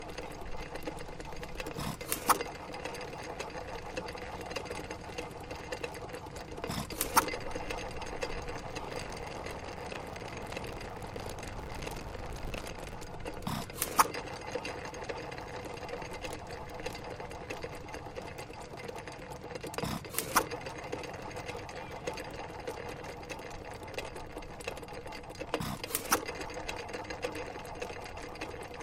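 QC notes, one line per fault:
8.84–12.97 s, buffer tearing: a robotic 50 Hz rattle rides on the sound as writer and reader cross inside each 20 ms period, so roughly half of every period replays audio some 40 ms old. Unlike dropouts, nothing goes silent; the rattle follows the signal.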